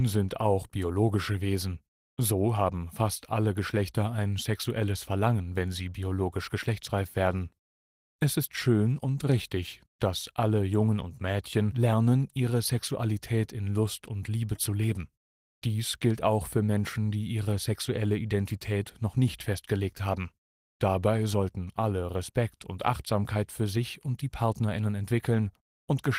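No technical faults can be heard anywhere in this speech recording. The Opus voice compression leaves only light coding traces and keeps the full band, which fits hybrid-mode Opus at around 20 kbps.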